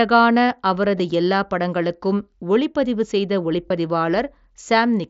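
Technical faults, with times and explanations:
0.99 s and 3.68–3.70 s, concealed Bluetooth headset packet loss: the headset link dropped audio, and the phone patched each gap by repeating the closest-matching recent stretch of waveform. The first gap, just before "எல்லாப் படங்களுக்கும் ஒளிப்பதிவு செய்த", is nearly hidden. The second, right after that phrase, is long enough to leave a brief buzzy tone and a slight warble as real sound resumes. The gaps fit one and three lost 7.5 ms mSBC frames.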